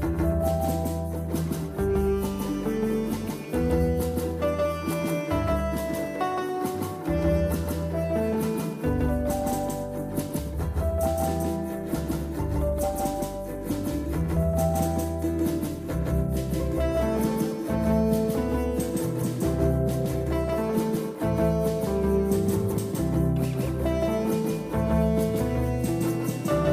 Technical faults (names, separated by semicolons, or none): doubled audio track